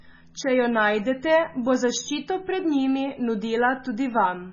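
MP3 compression damage runs through the whole speech clip and is heavy. There is nothing above 7.1 kHz, where the encoder has cut the treble outright, which fits a very low bitrate of around 16 kbps. The likely cause is that too few bits forced the encoder to zero the weaker frequency lines, so detail switches on and off from frame to frame. The result is a dull, watery, swirling sound with smeared onsets.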